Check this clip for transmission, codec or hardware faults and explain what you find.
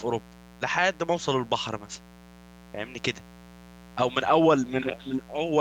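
There is one fault, a mains buzz, and it runs under the speech for the whole clip. It is tied to 60 Hz mains. Sharp switching spikes, likely from a dimmer, rectifier or missing shield, leak into the signal twice per cycle. That gives a 120 Hz repetition with harmonics reaching several kilohertz. The result is a steady, raspy buzz rather than a smooth hum. It sits about 25 dB below the speech.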